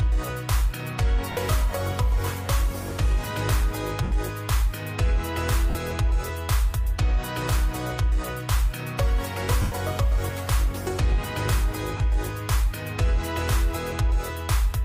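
Five brief noisy smears interrupt the sound at 1.32–1.37 s, 4.03–4.12 s, 5.70–5.75 s, 9.62–9.72 s and 11.97–12.00 s, lasting 30 to 100 ms. These are lost LE Audio frames, each gap fitting a run of 10 ms frames. The LC3 decoder filled them by repeating the last spectrum with scrambled signs and fading it, while the light lossy compression underneath stays faint.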